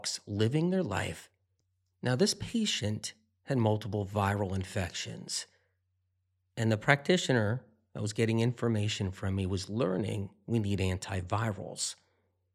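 No technical faults can be heard anywhere in this speech recording. There is no moment in it that calls for a timestamp or an explanation.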